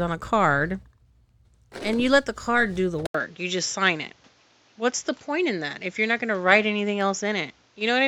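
At 3.07 s the speech drops out for about 80 ms, then returns duller and boxier, with nothing above 7.6 kHz and a new background noise about 35 dB below the voice, lasting to the end. Loudness stays about the same. The likely cause is the input switching to a poorer device. A codec narrowing its bandwidth would not bring the brief silence or a different noise floor; this change comes from different hardware.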